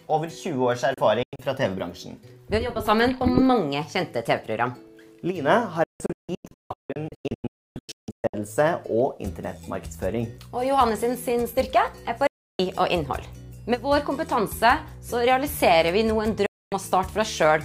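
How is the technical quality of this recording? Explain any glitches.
The recording is marred by repeated digital broadcast dropouts, where the receiver lost valid frames and muted until clean ones returned. They occur at 0.94 to 1.40 s (short holes totalling 160 ms, longest 96 ms), 5.84 to 8.34 s (about 1.8 s missing across 2.5 s, in gaps up to 288 ms), 12.27 to 12.60 s, and 16.46 to 16.72 s. Each cut fades in about 3 ms, so the sound snaps to silence and resumes with the intervening audio gone. The gap lengths fit frames of roughly 32 ms.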